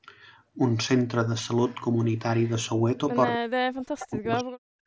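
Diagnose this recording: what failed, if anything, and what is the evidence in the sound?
Echo leak at 1.68–1.75 s and 2.40–2.51 s: faint copies of the speech arrive 283 ms late, about 30 dB down, likely loudspeaker pickup the call's echo canceller missed.

Speech suppressed in double talk from 3.35 s to the end: the speech falls by around 40 dB, likely call-processing echo suppression clamping it while the far side talked.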